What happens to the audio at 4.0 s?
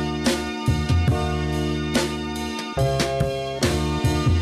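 Nothing goes wrong at 4.0 s; the audio runs on intact through that moment with no dropout, click or distortion.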